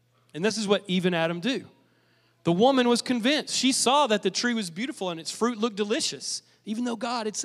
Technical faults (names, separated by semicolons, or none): none